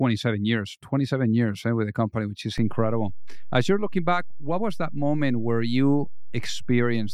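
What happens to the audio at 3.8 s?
A DC step is in effect at 3.8 s: the waveform's zero line jumped at 2.58 s and stays displaced through to the end of the clip. The shift is about -25 dBFS, the kind of offset that appears when a converter recalibrates or an input carrying a standing DC bias is switched in. At 3.8 s the offset is simply holding, so nothing new is heard there; the only audible sign was the low thump at 2.58 s, while the speech carried on unchanged.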